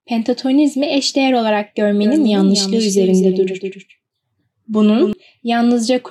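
A doubled audio track runs from 2.01 s to 5.13 s in this speech clip, starting just after "pentatonizmi eşdeğer olarak": a second, quieter full-band copy trails the original by around a third of a second, with no reverb tail, and cuts in and out abruptly, likely from a slower parallel capture path.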